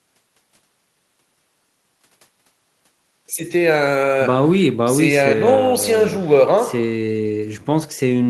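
No technical faults can be heard anywhere in the speech, so there are none to describe in time order.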